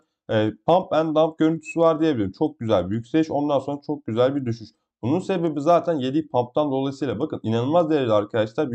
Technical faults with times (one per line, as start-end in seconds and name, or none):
none